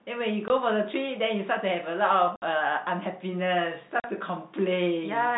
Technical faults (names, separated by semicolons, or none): packet loss filled with silence